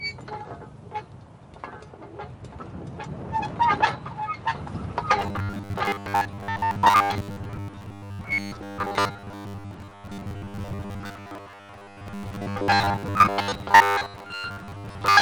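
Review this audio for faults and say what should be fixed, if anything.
From about 5.19 s to the end at 15.21 s there's robotic sound from repeated short buffers: a rigid, metallic buzz at 100 Hz. That points to a 10 ms chunk being replayed for most of the stretch, likely because new audio arrived too slowly. Prevent it with bigger buffers or faster delivery.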